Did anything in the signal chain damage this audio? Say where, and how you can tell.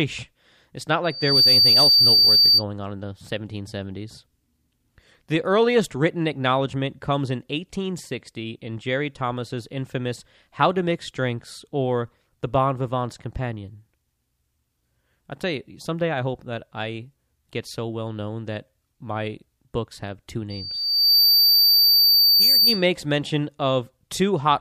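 Yes. The damage happens in the analogue acoustic loop between the loudspeaker and the microphone, which gives loudspeaker feedback squeal twice. A microphone is picking up the speaker it drives, and near 4.6 kHz the loop gain goes above one. That tone feeds on itself. From 1.04 to 2.64 s it swells over roughly a third of a second. From 20.50 to 22.86 s it rises more slowly, over about 0.7 s. Each time it sits about 10 dB above the speech as a single-pitch squeal.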